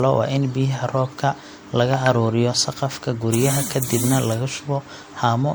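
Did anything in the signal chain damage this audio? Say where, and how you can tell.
Yes, at the codec stage, throughout the speech: it sounds swirly, hollow and smeared, with blurred attacks. That is generation loss, likely from about four re-encodes through MP3 at 96 kbit/s. A spectrogram shows accumulated spectral holes, smeared onsets and nothing above 20.9 kHz.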